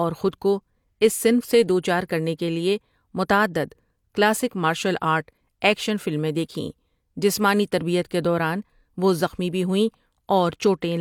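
No technical faults can be heard anywhere in the speech. There is nothing to time-stamp and no moment that stands out from the rest.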